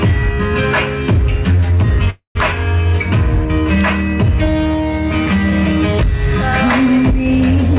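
At 2.1 to 2.37 s, heard over band-limited audio with nothing above 4 kHz, a call audio freeze stretches the last sound into a fading buzz, then about 120 ms of silence, likely from late packets draining the jitter buffer. Unlike a dropout, nothing is cut: the sound resumes where it stopped, about 250 ms later.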